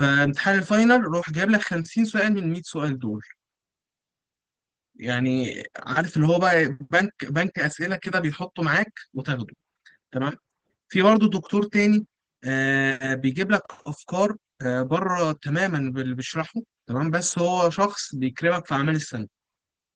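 Opus voice compression runs through the whole speech clip at a rate that fits about 16 kbps, in hybrid mode with 20 ms frames. The linear-prediction layer codes the excitation coarsely, so the speech comes out plainly hoarse and slightly robotic.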